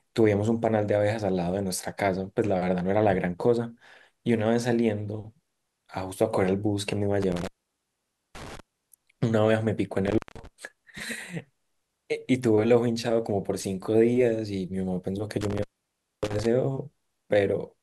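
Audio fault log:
7.22–8.60 s, 10.07–10.47 s, 15.41–16.46 s: intermittent contact. A loose connection briefly opens, dropping the speech for about 0.87, 0.17 and 0.59 s with crackle at each break; spectrogram shows near-empty gaps flanked by broadband vertical spikes.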